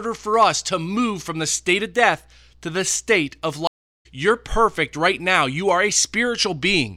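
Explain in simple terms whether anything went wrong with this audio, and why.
Something did go wrong, and it's a stream reconnect. Right after "to the state of", around 3.67 s, the speech drops out and stays silent until about 4.06 s, a gap of roughly 0.37 s. When it comes back, it doesn't pick up where it left off. It jumps ahead by roughly 0.4 s, so a bit of speech is simply missing. That's what happens when the connection breaks and the player reconnects to a live stream that kept running without it.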